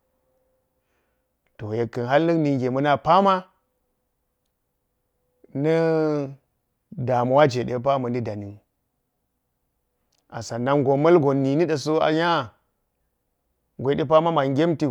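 No technical faults are audible anywhere here.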